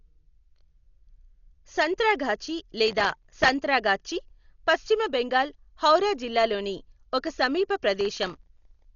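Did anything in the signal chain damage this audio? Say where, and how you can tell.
Yes. At the codec stage, the speech was likely passed through Dolby Digital compression at a very low rate, with throughout damage that fits roughly 40 kbps. The encoder has cut the band so nothing survives above about 6.9 kHz, making the voice dull. Many frequency lines were given no mantissa bits and were refilled with dither noise by the decoder, leaving a rough, fluttering haze around the tonal parts of the speech.

At the driver or buffer stage, the processor fell behind and missed its deadlines for tiny buffers, each well under a millisecond long, dozens of times in a row. This processor overload crackle appears from 2.86 to 3.48 s and again from 8.01 to 8.85 s. Each missed buffer was filled with stale audio with hard edges, so the sound tears into a gritty crackle that stops once the load eases.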